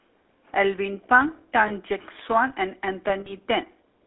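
Speech that's clearly been through the GSM full-rate codec the whole way: buzzy, gravelly and coarse, squeezed into a band of roughly 250 Hz to 3.6 kHz, which fits the old 13 kbps coder and its pulse-driven vocal-tract model. There are also lost GSM frames, once at 1.68 to 1.72 s and again at 3.2 to 3.33 s. In both the sound hangs on as a rough metallic ring while the last good frame is repeated. The first sounds like about one frame's worth, and the second like roughly three.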